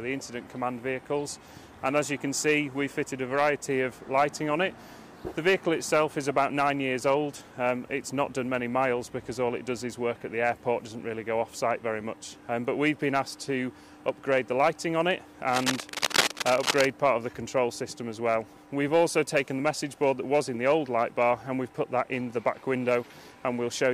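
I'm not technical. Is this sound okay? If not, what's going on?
No. There is cable scratch noise from about 15.49 to 16.85 seconds: for just over a second, a rough scratching, rustling crackle rides on top of the sound, roughly as loud as the sound itself. This is likely a worn cable, plug or knob being moved. When a tired metal contact shifts, the electrical connection flickers between good and poor very quickly, and each flicker adds an uneven burst of noise, which together sound like scratching.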